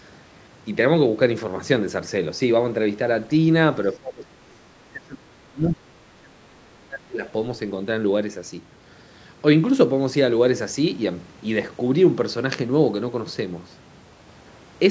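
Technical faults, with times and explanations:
3.94–7.23 s, speech suppressed in double talk: the speech sinks, by about 30 dB at its deepest, across roughly three seconds. The likely cause is an echo canceller that heard both ends talking at once, could not separate this voice from the loudspeaker echo, and turned everything down. A network dropout leaves brief gaps, but here about three seconds of this stretch are suppressed. The call processing's 8 kHz upper limit holds throughout.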